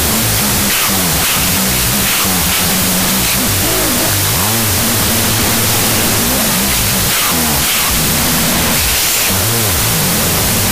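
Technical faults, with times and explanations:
Throughout, wrong sample width: the speech sits under loud, hissing noise and plays at half speed, an octave low, which fits 32-bit float data being read as 16-bit integers. Each original sample is split into two 16-bit values, doubling the sample count and halving the speed. The halves holding the low mantissa bits come out as near-random noise. Only the halves carrying sign, exponent and top mantissa bits keep a coarse, distorted trace of the speech.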